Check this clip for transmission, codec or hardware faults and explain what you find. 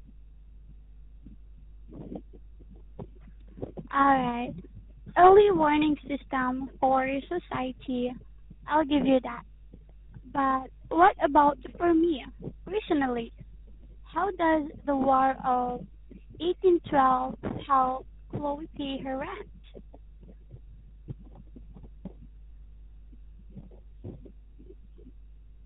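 Two faults run through the whole recording.

Mains hum is present throughout: a steady 50 Hz tone about 25 dB below the speech, leaked in from the power line. On a spectrogram it appears as a constant horizontal line at 50 Hz.

Tandem speech coding is also present throughout. The speech was coded twice in succession, consistent with a CVSD link, then a G.711 A-law link, feeding a GSM full-rate coder, so it sounds rough, muffled and warbly. A spectrogram shows nothing above 3.8 kHz and smeared formants.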